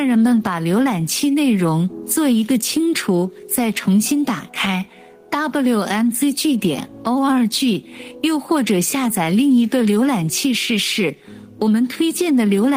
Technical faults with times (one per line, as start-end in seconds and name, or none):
0.00-12.77 gain pumping